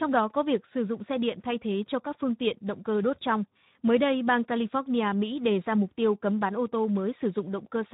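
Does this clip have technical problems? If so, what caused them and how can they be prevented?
Yes. Speex codec damage runs throughout the speech, from start to finish. Speex is a CELP codec that rebuilds speech from a vocal-tract filter driven by a coded excitation signal. Here the excitation gets too few bits, and the degradation is plainly audible: voiced sounds come out rough, hoarse and grainy, with a noisy edge. That level of damage fits a low-to-middle Speex setting, around 11 kbps. To prevent it, use a higher Speex quality setting, or better, a modern codec such as Opus at an adequate bitrate.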